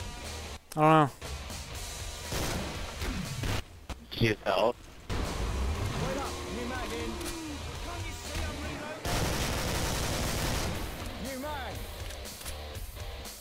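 From 1.22 s to 12.58 s a short click recurs every 1.42 s, about ten in all, each one a small discontinuity where a handful of samples vanish or repeat. These are likely clock drift buffer slips: two devices whose clocks differ by something around 150 ppm, so the buffer between them creeps until it must correct. On a waveform each shows as a tiny step; on a spectrogram, as thin, evenly spaced vertical lines.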